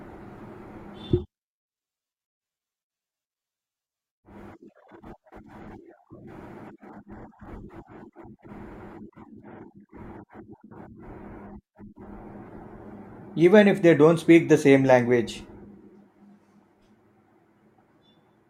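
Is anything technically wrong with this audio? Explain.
No, nothing technically wrong turns up anywhere in this speech recording.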